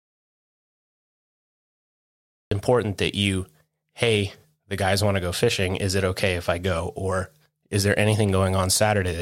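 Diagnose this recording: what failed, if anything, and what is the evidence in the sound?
The clip opens in an audio dropout to silence: from the very start until 2.51 s there is dead digital silence, with no room tone or noise floor at all, and then the speech cuts in abruptly mid-flow. The input was likely lost upstream, at the device link or analogue wiring, while the recorder kept writing silence. A noise gate or fade-in would leave some residual floor or a ramp. Here the gap is silent throughout and the return is instantaneous.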